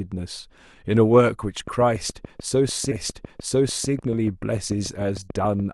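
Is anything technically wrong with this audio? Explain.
Yes, there are two faults.

From 1.68 s to 5.6 s there is a train of clicks: about twenty similar pulses at a regular 6.85 per second, peaking about 5 dB above the speech. They tick through pauses as well. The likely cause is interference from nearby equipment or a faulty connection or power supply.

At 2.91 s a stream segment is repeated. The player queued the same chunk twice, so one second of speech, up to 3.91 s, plays again. A small blip marks the jump back, and the clip runs a second longer.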